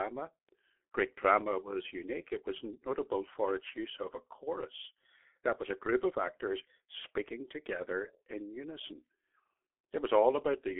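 Speech squeezed through a G.723.1 codec at a rate that fits roughly 6.3 kbit/s heavily damages the whole clip, leaving nothing above 3.7 kHz and a muffled, hoarse sound with smeared consonants.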